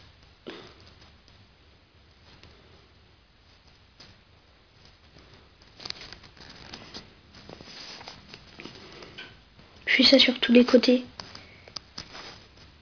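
Aliasing runs through the whole clip. The sound appears to have been taken down from a high rate, which fits 48 kHz, to a much lower one, which fits 11 kHz, without removing content above half the new rate. Everything above 5.5 kHz folded back below that point and landed at wrong, unrelated pitches, sitting roughly 15 dB under the wanted signal. Bright, hissy parts come out gritty and metallic, and the spectrum stays full right up to the 5.5 kHz edge.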